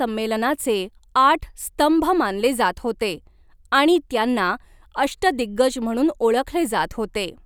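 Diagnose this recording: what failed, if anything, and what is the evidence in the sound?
Nothing failed here, as far as I can hear: there's no audible fault at any stage of the chain.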